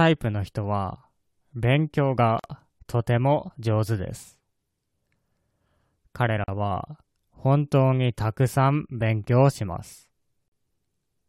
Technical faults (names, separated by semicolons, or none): gap at a join of encoded pieces